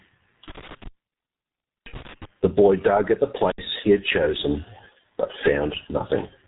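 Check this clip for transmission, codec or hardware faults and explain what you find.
Two problems turn up in this speech clip: heavy low-bitrate codec damage running the whole way through, and a dropout from a bad connection near the start.

The G.723.1 codec colours everything. Nothing gets through above about 3.8 kHz, so it's muffled and hoarse, and consonants smear. That's the codec coarsely modelling the voice in long frames and updating slowly, which fits its 6.3 kbit/s mode.

Between 0.48 and 2.25 s there's an intermittent contact fault. A loose plug or cable breaks the circuit, and the signal drops out for about a second in total across that span. Crackle marks where the contact opens and closes, with faint hiss left in the gaps.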